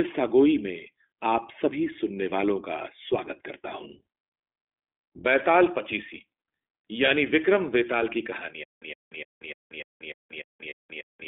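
iLBC codec throughout this speech recording: the band is confined to about 300 Hz to 3.5 kHz, and each 20 ms frame's excitation is coded independently, leaving a plainly rough, synthetic edge consistent with 15.2 kbps iLBC. Lost iLBC frames at 7.06 to 7.09 s and again at 10.70 to 10.73 s: each gap becomes a brief, buzzy held vowel, which fits a single lost 20 ms frame concealed by repeating the last pitch cycle with noise, and the voice recovers immediately. Stutter with silent gaps from 8.64 s to the end: a 113 ms fragment replays nine times at a steady 297 ms period with 183 ms of digital silence between, most likely a stalled stream retrying and running dry, so the intended audio is lost.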